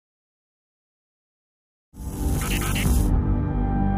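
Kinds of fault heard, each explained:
No faults can be heard.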